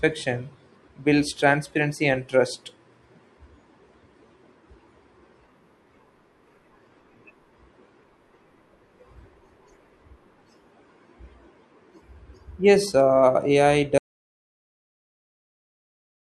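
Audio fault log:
13.98 s to end: audio dropout to silence. Speech stops dead, likely from a lost input; waveform flatlines and spectrogram goes fully blank, without room tone.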